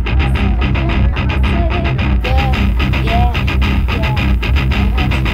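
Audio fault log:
2.21 to 5.33 s, pre-emphasis left on: the FM 50 µs treble boost was never undone, lifting 10 kHz about 11 dB over 1 kHz, so sound turns thin, bright and sibilant.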